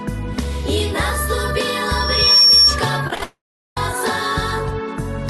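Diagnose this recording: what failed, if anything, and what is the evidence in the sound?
Loudspeaker feedback squeal sets in at 1.86 s and lasts until 2.78 s. The fault is acoustic, in the capture stage rather than the network: a microphone is hearing the loudspeaker it drives, and the loop gain passes unity at 5.5 kHz. The tone swells over roughly half a second and ends about 10 dB above the programme. On a spectrogram it shows as one thin horizontal line at 5.5 kHz that brightens as it builds, sitting inside the band the call codec keeps, which ends around 12 kHz.

Repeated packet loss (robotic sound) follows from 3.07 to 3.22 s. This is a network fault. There are five short holes, the longest about 22 ms, and concealment patches roughly half of that span by continuing the previous sound. The result is choppy. On a spectrogram the harmonics smear into short repeated blocks with hard vertical edges. 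On the waveform, stretches of copied cycles alternate with abrupt joins.

A long network dropout runs from 3.23 to 3.77 s, most likely a network outage that left the jitter buffer empty. The concealment carries the last sound forward as a buzz or hiss that fades away, and then about 0.39 s of silence remains before the audio resumes without the missing material. The waveform shows a decaying tail and then a flat line. The spectrogram shows blurred, fading energy ending in a blank column.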